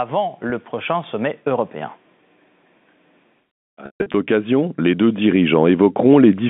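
A telephone-band speech recording carried over G.711 mu-law coding, with nothing above about 3.6 kHz. It has two fault types. Automatic gain rising: the gain control judged the input too quiet and raised it slowly, by about 3 dB from 0.09 to 2.03 s and about 5 dB from 4.27 to 6.45 s, so the speech and background swell together. Packet loss with pitch repetition: at 0.50 s, a 20 ms gap, consistent with a single lost packet, is covered by repeating the last pitch period, which sounds like a brief buzzy hold. From 3.86 to 4.14 s, losses totalling 200 ms, with a longest run of 140 ms, push the repetition past its fade so the sound drops to silence before returning on a short cross-fade.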